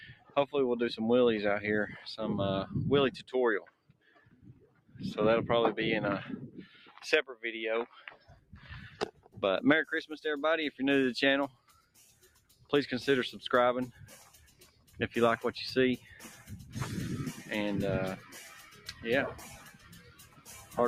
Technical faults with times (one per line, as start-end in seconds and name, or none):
0.00-20.88 noise suppressor applied to music or sounds
0.11-0.36 sound cut by the noise suppressor
3.64-5.01 sound cut by the noise suppressor
6.47-6.89 sound cut by the noise suppressor
8.08-9.37 sound cut by the noise suppressor
11.50-12.72 sound cut by the noise suppressor
13.92-15.00 sound cut by the noise suppressor
15.98-16.74 sound cut by the noise suppressor
18.18-20.88 sound cut by the noise suppressor